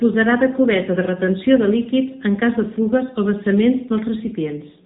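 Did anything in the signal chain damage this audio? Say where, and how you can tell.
Yes. The AMR narrowband mobile codec damage runs through the whole clip, at the codec stage. Nothing in the speech reaches above about 3.8 kHz, the ceiling of a codec that samples at 8 kHz. The voice is plainly buzzy and synthetic, which points to AMR-NB at around 8 kbps. That happens because each 20 ms frame is rebuilt from a vocal-tract model excited by only a few pulses, and there are too few bits to capture natural detail.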